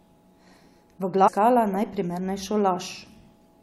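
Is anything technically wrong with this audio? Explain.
Yes. Damaged data in a compressed stream hits the speech at 1.27 to 1.29 s. Corrupted bytes there make the decoder misread the frames, lose sync and hunt for the next valid frame header, leaving a brief glitch that interrupts the sound.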